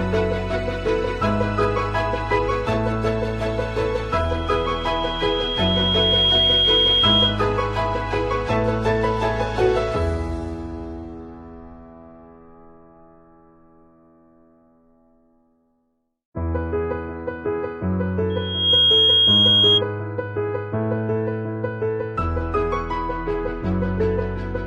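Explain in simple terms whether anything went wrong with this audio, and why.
Twice there's loudspeaker feedback squeal: a mic hears its own speaker, so one pitch near 3.3 kHz keeps feeding itself into a whistle. The first, 4.11 to 7.44 s, swells over about two seconds; the second, 18.30 to 19.82 s, jumps up fast and sounds louder.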